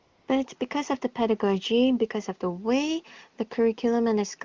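Right at the start, from 0 to 0.27 s, there's AMR comfort noise: the phone treated the opening as silence and sent no speech frames, so you hear a smooth synthetic hiss in place of the real background, before the HD Voice speech comes in clean, as you'd expect near the top AMR-WB rate.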